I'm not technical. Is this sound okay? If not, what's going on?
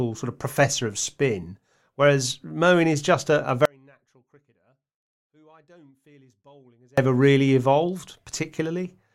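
No. Right after "is just a a", at 3.65 s, the speech suddenly drops away to a faint trace for about 3.3 seconds, returning at 6.98 s. This is an audio dropout to a faint residue, likely the signal lost for a while as the recording chain stayed running.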